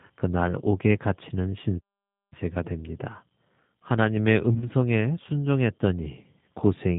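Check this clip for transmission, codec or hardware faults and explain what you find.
Two faults are present: a low-bitrate speech codec across the whole recording and one concealed packet-loss event.

G.729 codec, throughout: the speech is coded at 8 kbit/s by rebuilding it from a vocal tract filter, a pitch predictor and sparse pulses in 10 ms frames. The codec damage is plainly audible as a rough, synthetic quality, with nothing above 4 kHz.

VoIP packet loss concealed by the speech codec, 4.54 to 4.66 s: about 20 ms of audio went missing, which fits a single lost packet. The decoder filled the gap by extending its last pitch and filter settings at falling gain, giving a brief, fading smear. Because each frame builds on the previous one, the speech stays weakened until about 4.66 s.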